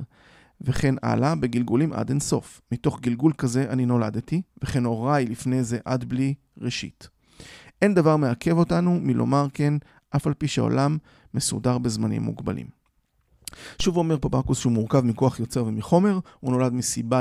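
Low thumps at 0.76 s and 13.80 s are DC steps: the waveform's zero line jumps by about -19 dBFS, then decays through a 5 Hz high-pass while the speech continues.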